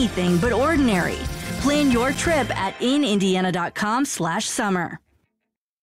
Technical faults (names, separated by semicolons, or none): block of digital silence